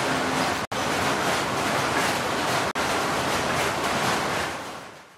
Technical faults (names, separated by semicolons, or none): gap between stream segments